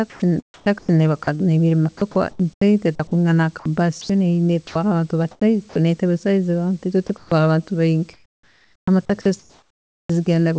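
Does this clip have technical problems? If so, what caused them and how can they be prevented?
Yes. Speech chopped by the voice detector runs from 0.10 to 1.41 s, 1.97 to 4.09 s and 8.13 to 10.09 s. Repeated on-off switching swaps syllables for comfort noise, about 1.5 s in the last stretch, which is likely an over-eager detector. Unlike a single dropout, it leaves several holes.

Sound dropped by the voice detector occurs at 4.67 to 4.75 s, 5.69 to 5.75 s and 7.07 s. Each is one brief gap where quiet speech, likely taken by the detector for background, becomes steady noise until sending resumes.

Comfort noise in place of the background appears from 5.31 to 5.75 s and 7.07 to 7.31 s. It affects only the pauses, where the textured room sound turns flat and featureless rather than any speech going missing.

Prevention: disable discontinuous transmission, or lower the detector's threshold and add hangover time, so quiet speech keeps being sent. 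The band stops near 8 kHz, which fits a 64 kbps G.722 call path.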